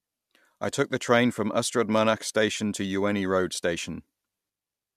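At 2.30 s the speech carries a single sharp click, a thin vertical line across the spectrum. This is dropped samples, likely a tiny fraction of a millisecond missing so the waveform jumps ahead. Unlike a dropout, no sound audibly vanishes.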